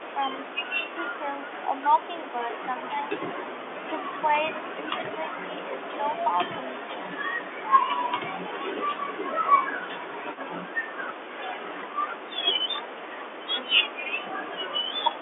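Speech over a telephone line, band-limited to roughly 300 Hz to 3.5 kHz, with two faults. The speech dips by about 5 dB in short pieces between 1.18 and 1.7 s and between 4.75 and 6.04 s. This is likely speech suppressed in double talk. An echo leak follows from 9.8 to 11.29 s: a faint copy of the speech, about 20 dB down, trails by 359 ms. It is likely loudspeaker sound the far end's canceller missed.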